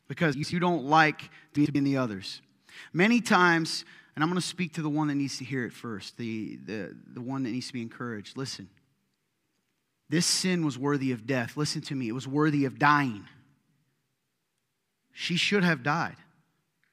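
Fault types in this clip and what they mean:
Frames out of order: Two neighbouring blocks of about 96 ms play swapped, near 0.33 and 1.55 s. Speech briefly garbles. Nothing is lost.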